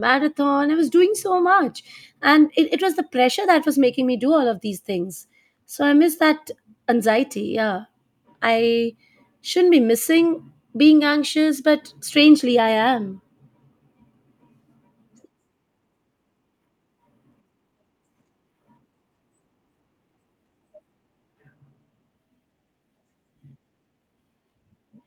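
No technical faults can be heard anywhere in the recording. There is nothing to place on a timeline, since no event stands out from the rest of the audio.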